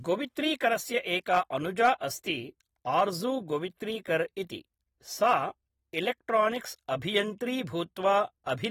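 Throughout the speech there is plainly audible codec damage: a dull, smeared quality with a fizzy, warbling edge on sibilants, and nothing above 19.4 kHz. This is likely AAC compression, AAC-LC quantising coarsely at a rate that fits about 48 kbps.

Hard clipping occurs at 1.33 to 1.39 s, 1.84 to 1.89 s, 2.99 s, and 5.24 to 5.34 s, with peaks overdriven by about 2 to 3 dB. The flattened tops add high harmonics, heard as brief crackle on the loudest moments.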